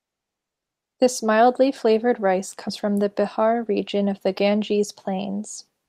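No technical faults can be heard in the recording. The speech continues without any break or audible damage at any point.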